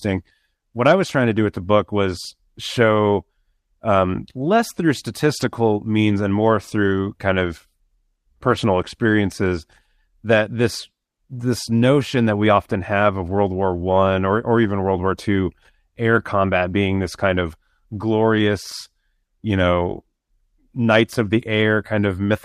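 Speech clip in which lost packets were rebuilt from error correction: the decoder filled each gap with the lower-bitrate backup copy carried in the following packet. Nothing drops out, but brief rough, noisier patches appear after "um less through" at 5.37–5.43 s, after "and more through kind" at 7.45 s, at 8.47–8.53 s, and after "or or" at 14.63–14.69 s. The 40 ms patches fit two lost 20 ms packets, and the 7.45 s one fits a single packet.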